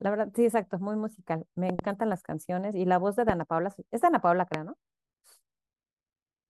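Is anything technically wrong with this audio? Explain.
Yes. Loud pops interrupt the speech: a double pop at 1.70 to 1.81 s, then single pops at 3.29 to 3.32 s and 4.54 to 4.56 s, each peaking about 15 dB above the voice. A likely electrical pulse, such as static or a switch transient, adds a sharp thump while speech continues underneath. Each appears as a tall waveform spike and a full-height vertical stripe on a spectrogram.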